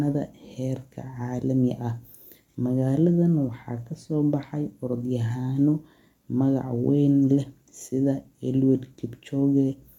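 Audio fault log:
No faults can be heard anywhere in this speech recording. Nothing in the sound calls for an entry in this log.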